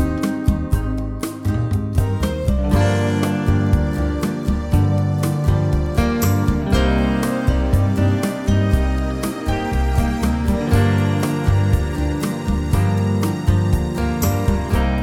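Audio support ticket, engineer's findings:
Bit error spikes at 0.72 s, 3.67 s and 5.86 s. Single sharp broadband ticks, unrelated to the program, peaking around -21 dBFS, then about -27 dBFS twice. First two single-sample, last spans two samples. Mechanism: a flipped bit in one or two stored values jumps the sample by a power of two, then snaps back. Probable component: memory buffer or digital interconnect.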